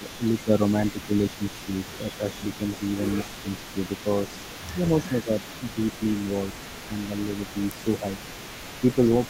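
From the start to 5.77 s the speech repeatedly dips by around 10 dB, with about a second and a half lost in total, and brief dips recur at 6.87 s, 7.54 to 8.04 s and 8.81 s. This is likely speech suppressed in double talk: the echo canceller, unable to separate this talker from the loudspeaker echo while both sides spoke, turned the voice down.

Throughout the clip a faint copy of the speech trails 186 ms behind, sitting about 20 dB below it. This is likely an echo leak, where the far side's echo canceller failed to remove all of the loudspeaker sound its microphone picked up and sent the remainder back.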